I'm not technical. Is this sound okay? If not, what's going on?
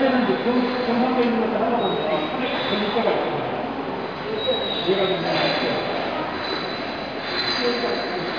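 Yes, this sound is okay; nothing here is wrong.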